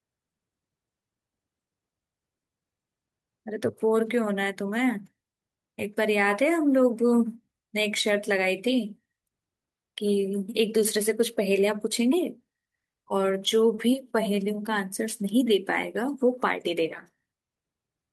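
At 13.75 to 13.79 s the speech hits a short stall from a late packet: the jitter buffer ran dry, so the receiver stretched the last sound by 20 ms before resuming, losing nothing. It sounds like a briefly held syllable with a faint buzz or dip; a spectrogram shows horizontally smeared, repeated harmonics there.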